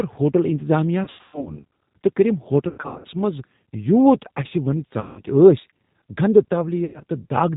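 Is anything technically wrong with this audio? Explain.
Yes, two faults are audible.

G.729 codec damage runs through the whole clip. At 8 kbit/s the speech is rebuilt from a vocal tract filter, a pitch predictor and a few pulses per frame. Nothing above 4 kHz survives, so the voice sounds rough and noticeably synthetic.

VoIP packet loss concealed by the speech codec occurs at 1.04 to 1.65 s, just after "ہوٹل انتظامیہ"; at 2.69 to 3.07 s, just before "منٛز یوٗت"; at 5.00 to 5.22 s; and at 6.85 to 7.01 s. The first two are scattered dropouts with runs up to 120 ms. The decoder fills missing frames by extrapolating its last pitch and filter while lowering the gain. The gaps therefore smear into fading buzzy tones or coloured noise, and the speech stays weak and distorted briefly afterwards.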